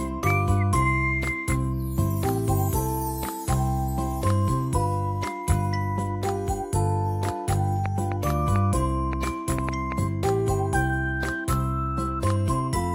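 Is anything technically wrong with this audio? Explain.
Yes. A train of clicks runs from 7.86 to 9.93 s: about seven sharp pulses at roughly 2.9 per second, spaced unevenly. Each click has much the same shape, and the strongest stand around 15 dB above the surrounding sound. The likely cause is an outside source repeatedly injecting a brief spike, such as electrical interference from nearby equipment or a faulty connection or power supply. It is heard as irregular ticking or popping laid over the audio for about two seconds.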